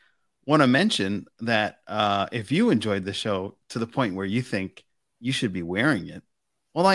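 Nothing in this bit of speech gives a listener anything to flag, so there's no technical fault to describe here.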